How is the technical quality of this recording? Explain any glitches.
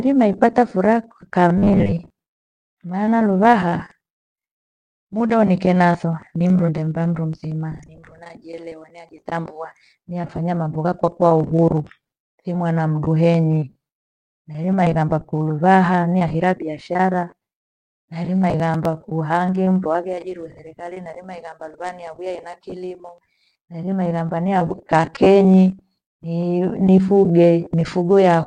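The recording has two short glitches.

From 1.58 to 1.94 s there is robotic sound from repeated short buffers. The speech becomes a stiff metallic buzz at 100 Hz, likely because a 10 ms stretch is replayed in place of most of the real audio. On a spectrogram this appears as evenly spaced horizontal harmonic lines.

From 18.44 to 18.85 s there is processor overload crackle. Several buffers of about 10 ms each miss their deadline and are skipped, leaving tiny hard-edged gaps. The result is gritty tearing. The waveform shows brief dropouts, and the spectrogram shows thin vertical broadband streaks.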